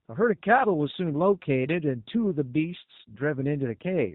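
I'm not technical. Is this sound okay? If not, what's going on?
No. The whole clip went through the G.729 codec, a phone-call compressor. It drops everything above 4 kHz and rebuilds the speech, so it sounds muffled, rough and robotic throughout.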